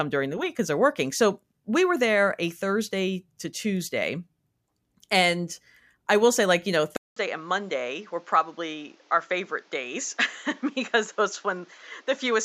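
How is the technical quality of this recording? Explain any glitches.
The recording has one clear fault. At 6.96 s the speech drops out for 200 ms, then continues to the end with nothing above 7.6 kHz, a somewhat lower level and a new background noise. This is likely an input switched to a poorer device, a narrower-band microphone or headset. The gap, the changed noise and the level change set it apart from a simple filter or codec change.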